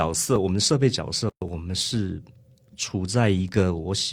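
From 0.36 s to 3.49 s there's a steady click roughly once a second, around four of them. That's most likely clock drift buffer slips: two clocks disagreeing by something like a thousand parts per million, so the buffer periodically drops or repeats a few dozen samples.

At 1.30 s the sound cuts out for 123 ms, until 1.42 s, then picks up where it left off. That's a gap at a join of encoded pieces. Separately encoded chunks were stitched together untrimmed, leaving encoder delay and frame padding as a silence with smeared edges.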